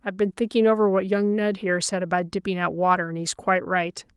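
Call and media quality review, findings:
No audible faults found.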